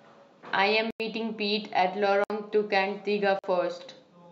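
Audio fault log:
0.91–1.00 s, 2.24–2.30 s, 3.39–3.44 s: block of digital silence. The speech drops out for about 93, 60 and 46 ms. These hard cuts are heard as short holes, and the first and last gap lengths fit whole buffers of 4096 and 2048 samples.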